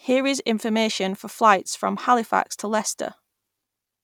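A short speech recording with nothing technically wrong with it.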